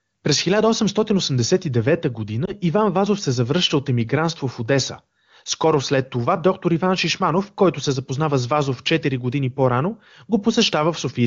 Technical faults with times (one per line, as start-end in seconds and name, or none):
2.45-2.53 lost AMR speech frames